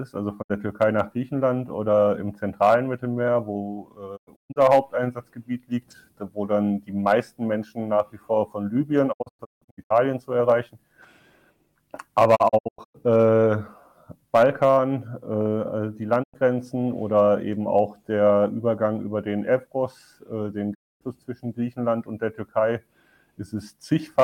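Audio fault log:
0.41–0.52 s, 4.16–4.58 s, 9.12–9.92 s, 12.35–12.96 s, 16.22–16.36 s, 20.73–21.03 s: digital broadcast dropout. The receiver mutes bad frames with 20 ms fades, losing 64 to 512 ms each time. The second to fourth break into several short holes, which fits 32 ms frames. The missing audio is not recovered.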